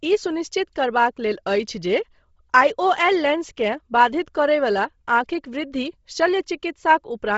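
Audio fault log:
throughout, Bluetooth LC3 compression: the speech has nothing above about 7.7 kHz, and what remains near the top is grainy and breathy rather than clear. This is likely the LE Audio transform codec running short of bits. It discards much of the upper spectrum in each short frame and fills gaps with shaped noise, which causes the rough, hissy edge. The heavy damage fits a low bitrate near 24 kbps with 7.5 ms frames.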